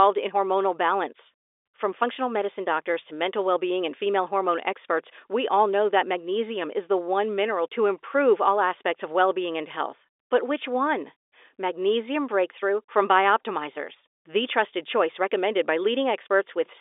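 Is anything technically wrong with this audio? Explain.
No, nothing here is technically wrong.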